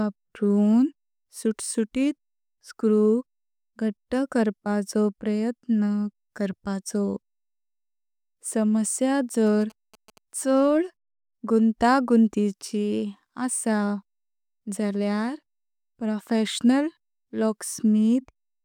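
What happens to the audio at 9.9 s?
A galloping dit-dit-dit of short buzzes at about 217 Hz sits well below the speech from 9.47 to 10.18 s. These are GSM signalling bursts: a nearby 2G phone exchanging short radio bursts with the network, which the audio circuitry rectifies into audible interference.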